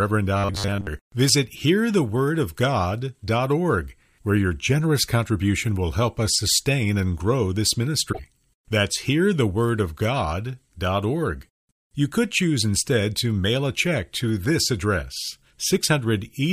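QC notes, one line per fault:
0.37–0.87 s, robotic sound from repeated short buffers: audio likely arrived too seldom, so the player kept replaying a fragment of about 10 ms and skipped most of the real signal. That loop imposes a rigid, metallic 100 Hz buzz that only loosely tracks the speech.
8.09–8.19 s, damaged data in a compressed stream: corrupted bytes in the encoded stream made the decoder misread frames and lose sync while searching for the next valid header. Right after "sustain and grow this", this comes through as a short glitch lasting about 0.1 s.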